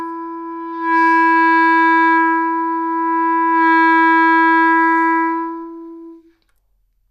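No faults turn up anywhere in this recording of sounds.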